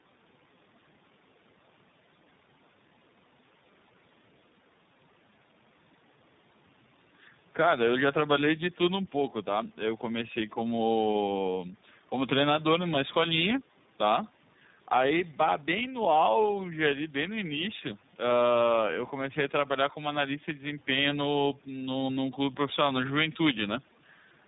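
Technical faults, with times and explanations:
Throughout: tandem speech coding, speech passed AMR-NB then iLBC via G.711, each codec re-coding degraded output, leaving rough, warbly speech with nothing above 3.8 kHz.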